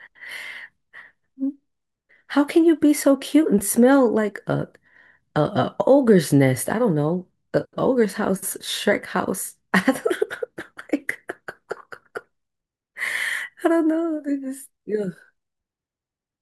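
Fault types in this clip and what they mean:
Nothing stood out on listening to this speech recording.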